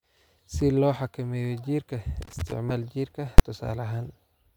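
At 2.22 s a loose connector crackle begins and runs to 2.52 s, about 0.3 s in all. A worn or dirty contact is making and breaking as it shifts. Each break chops the signal off. The result is a ragged, irregular scratching laid over the speech.

Between 2.67 and 2.71 s there is damaged data in the compressed stream. For roughly 36 ms the decoder is fed bytes that do not make sense. It loses its place in the frame sequence and has to hunt for the next valid header before it can resume. That failure comes out as a short glitch in the speech.

At 3.38 s a burst of invalid numbers at full scale hits the output. A calculation produced values that were infinite or undefined, and these were forced to an extreme value far beyond the peaks of the audio. The affected block lasts about 11.6 ms, which fits a 512-sample processing block. That is too short to hear as separate pops at each end, so it lands as a single hard bang, far louder than anything around it.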